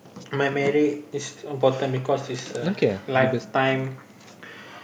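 No technical faults can be heard anywhere in this speech recording. Nothing interrupts or disturbs the sound at any point.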